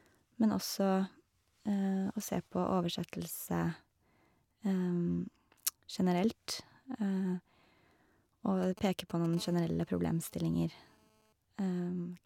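From 8.63 to 9.35 s, GSM signalling bursts from a nearby 2G phone break into the speech. The handset is only exchanging short control transmissions, and the audio circuitry rectifies each radio pulse into a click, producing a galloping dit-dit-dit of brief 217 Hz buzz fragments, roughly 15 dB below the speech. On a waveform these look like short clustered spikes riding on the speech. A spectrogram shows separated blocks of vertical lines spaced about 4.6 ms apart.

At 9.37 s, almost immediately after, a steady GSM phone buzz begins and lasts until 11.33 s. At this point the phone is transmitting continuously as in a call, pulsing 217 times a second, and the rectified pulses become a hard, raspy drone unrelated to the speech, about 30 dB below it. A spectrogram shows a dense comb of horizontal lines at 217 Hz and its many harmonics. The waveform carries a regular, faint ripple beneath the speech.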